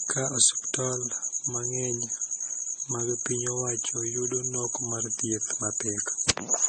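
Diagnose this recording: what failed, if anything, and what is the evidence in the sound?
The codec stage failed: the speech shows transcoding between lossy codecs throughout, likely an MP3 pass at around 32 kbit/s re-encoded as Vorbis at a similar rate. Nothing sounds above 8.4 kHz, and two distinct artefact textures overlap, which a single low-bitrate encode would not produce.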